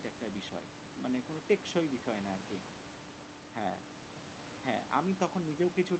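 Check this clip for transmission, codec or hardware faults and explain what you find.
Nothing here points to a transmission, codec or hardware problem: the low room noise sits about 15 dB under the speech, and the top end stops near 8 kHz, which is just what you'd expect from a call running through Opus at a modest bitrate.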